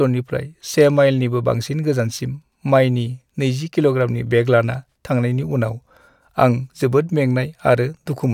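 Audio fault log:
No faults detected in the speech audio.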